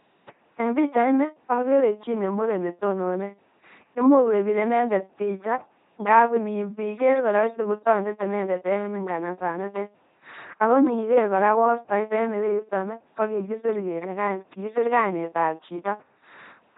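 A buzzing, mechanical robot quality runs through the whole of this speech clip, with harsh buzz and hiss breaking in wherever the voiced and unvoiced decision goes wrong, and nothing is heard above 3.8 kHz. This is heavy damage from an LPC-10 vocoder, which rebuilds speech by driving a ten-pole vocal tract filter with either a pulse train or noise, never a mix. The crudeness points to a very low bitrate, which fits 2.4 kbit/s.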